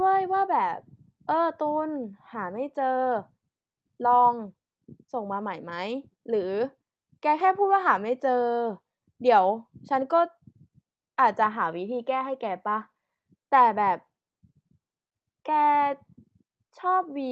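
The speech has no technical faults: it has passed through a WebRTC call path, and the Opus coding there limits the audio to an 8 kHz bandwidth, which is that path working as intended rather than a defect.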